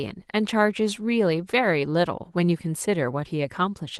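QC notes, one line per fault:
No faults heard in this speech clip.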